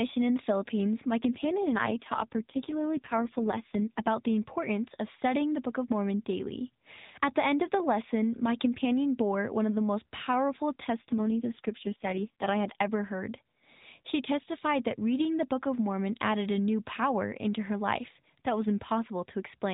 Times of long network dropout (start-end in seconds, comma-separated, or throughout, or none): none